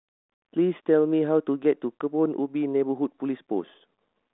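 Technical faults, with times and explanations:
No technical faults can be heard in the speech. The G.726 ADPCM path holds the band between 250 Hz and 3.6 kHz with only a light coding grain, which fits a 32 kbit/s telephone link.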